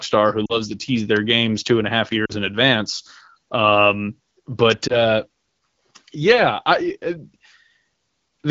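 Speech, carried over an AMR wideband (HD Voice) codec at 12.65 kbit/s with only light codec coloration, is broken three times by lost AMR speech frames. Around 0.46 to 0.60 s and 2.25 to 2.32 s, about 40 ms of audio is missing, which fits two dropped frames, and at 4.88 to 4.97 s about 20 ms is missing, which fits one. The decoder fills each gap by repeating the last good pitch and spectral envelope at falling gain, so the sound smears, warbles and dips before recovering roughly. On a spectrogram, the harmonics stretch flat and fade. At 4.71 s there is an electrical switching spike, likely from a nearby switch or discharge. It is a sharp snap or tight cluster of clicks laid over the speech, seen as a thin full-band vertical line on the spectrogram and a narrow spike in the waveform.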